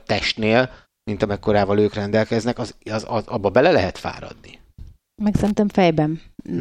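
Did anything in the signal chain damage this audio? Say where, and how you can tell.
Yes. From 5.38 to 5.51 s the speech is broken by a short, irregular burst of scratchy crackle lasting about 0.13 s, with the signal seeming to stutter in and out under it. That is loose connector crackle, and it places the damage in the analogue wiring. A worn or dirty contact in a plug or jack was making and losing contact as it shifted, chopping the signal into ragged fragments, while any DC on the line turned each reconnection into a pop.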